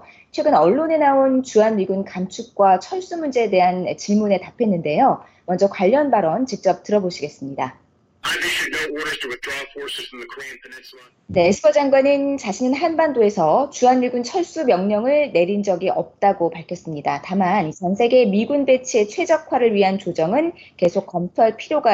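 A steady 20 Hz tick rides under the audio from start to finish, and it's the classic sign of a resampler restarted on every block. The tick spacing points to 50 ms chunks, and the sound fits a 48 kHz to 44.1 kHz conversion done one chunk at a time with no carry-over. Each restart leaves the converter guessing at the missing neighbouring samples, so every block boundary gets a small error, and those errors line up into that regular tick whenever there's signal.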